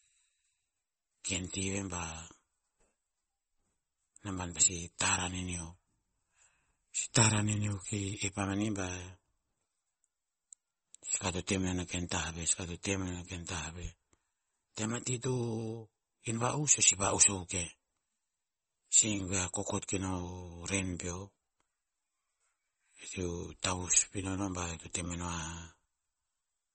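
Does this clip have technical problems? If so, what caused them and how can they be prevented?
Yes. Throughout, the speech sounds watery and swirly, with no content above 8.4 kHz, likely from MP3 compression at a bitrate that fits 32 kbps. Encoding at a higher bitrate would prevent it.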